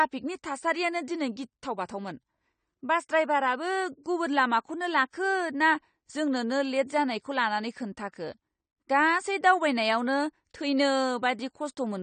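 From the first second to the last, the speech is dull and smeared, with nothing above 9 kHz and a warbling, fizzy texture on sibilants and held sounds. This is likely AAC compression, and the damage is plainly audible. The codec has quantised the spectrum so coarsely that the result fits AAC-LC at about 32 kbps. A simple low-pass filter would also remove the top end, but it would leave the remaining bands clean. Here the bands that remain swirl, which points to a bitrate-starved transform codec rather than plain filtering.

Between 4.04 and 4.06 s, after "बास ड्रायभाराबो" and just before "गुबुन लामाखौनो", a short hiss of about 21 ms runs ahead of a sharp onset, and the attack itself sounds softened. This is pre-echo. The codec spread its quantisation noise across the whole transform block, so noise sized for the loud attack also filled the quiet moment before it. A click would be a single instant, and reverb trails after a sound. 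This smear comes before the attack.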